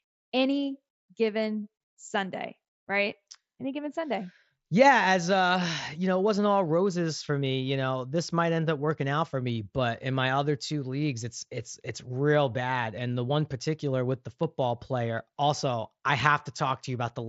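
No faults are audible in the speech; what is heard is a normal wideband Bluetooth headset link, with the top end stopping at 8 kHz and a light grain on the louder passages.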